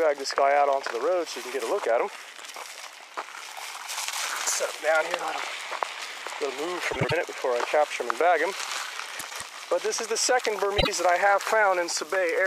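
Frames out of order at 6.92–7.12 s, 9.19–9.42 s and 10.78–10.88 s: neighbouring blocks of about 78, 105 and 26 ms play exchanged, giving a garbled flutter. Spectrograms show abrupt vertical seams, and nothing is missing.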